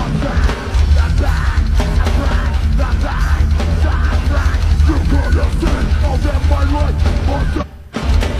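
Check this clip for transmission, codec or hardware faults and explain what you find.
Three brief faults show up, all damaged data in a compressed stream, at 1.95–2.00 s, 5.99–6.04 s and 7.57–7.64 s. Corrupted bytes make the decoder misread frames and resynchronise, heard as a chirp, squawk, click or short hole at each spot.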